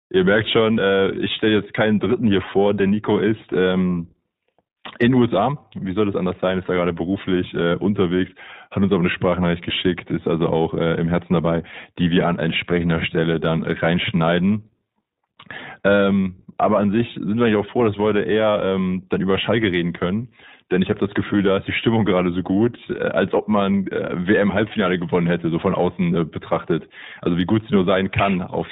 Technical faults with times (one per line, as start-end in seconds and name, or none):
0.00-28.71 iLBC codec